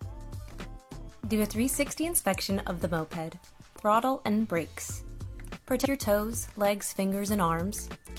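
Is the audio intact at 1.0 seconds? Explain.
Yes, the audio at 1.0 seconds plays through intact, with no dropout, glitch or other fault at that moment.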